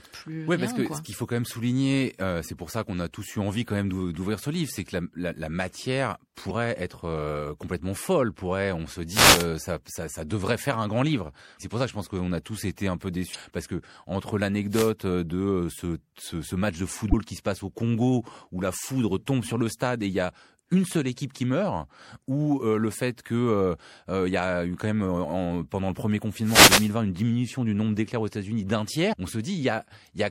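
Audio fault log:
throughout: MP3 compression, likely at a low bitrate around 64 kbps, plainly audible as watery, swirly speech with dulled treble, unlike short bursts, it never lets up.
9.08–9.48 s, 14.70–14.93 s, 26.42–26.93 s: wireless microphone noise hit, a swish of static as the radio signal fades, noise-like rather than a single tonal chirp.
13.31–13.36 s, 17.10–17.14 s, 29.12 s: damaged data in a compressed stream, a brief chirp or blip as the decoder loses sync.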